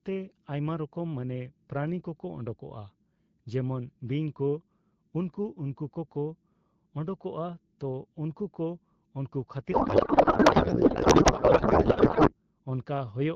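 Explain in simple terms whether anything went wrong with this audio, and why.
From 9.71 to 12.34 seconds, just after "ᱛᱚ ᱩᱱᱠᱩ ᱠᱚ ᱩᱱᱠᱩ", the speech turns into garbled noise and warbling that barely follows what was being said. This is a codec payload misread. The call uses the AMR wideband (HD Voice) codec, and the sending side packed its bits in one layout while the receiving side read them as a tighter layout. Every field landed in the wrong place, so the decoder rebuilt nonsense until the two sides matched again.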